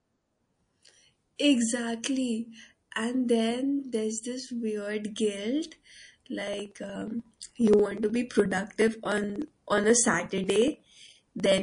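Throughout the speech, the sound is watery and swirly. The treble is cut off, and sibilants carry metallic chirps. Faint detail flickers in and out from moment to moment. This is likely MP3 compression at a low bitrate, which fits something near 40 kbps. The encoder runs short of bits. It drops the top band and zeroes quieter frequency lines, so those lines switch on and off between frames. Attacks lose their edge.

At 1.36 s a pre-echo appears. A short hiss rises about 16 dB above the quiet just before a sharp attack. It spreads 31 ms ahead of that attack, to 1.39 s. The codec spread its quantisation noise across a whole 52 ms block, and the attack sat late in that block. Short blocks were never used, so the noise meant for the loud part leaked backward. The attack sounds softened.

From 6.41 s to 11.58 s, periodic USB or driver dropouts break up the audio. A tick sounds every 0.06 s. Each tick comes from a tiny gap of a few milliseconds. 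There are around a hundred of them. The lost audio is skipped, not replaced with silence, so the sound jumps ahead slightly each time. Something blocked the bus or driver at a fixed interval. The ticks are heard only while speech is present.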